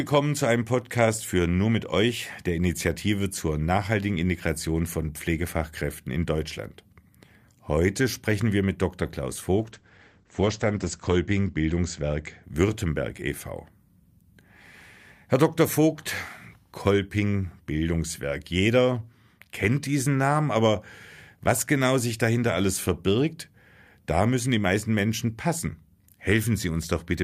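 Speech, with a call bitrate drop from 9.61 to 12.49 s: the encoder is starved, consistent with roughly 64 falling to 12 kbps, so the voice turns rough and watery and the bandwidth narrows from 20 kHz to 8 kHz for about 1.55 s. There are no gaps or repeats as with packet loss, and full brightness returns afterward.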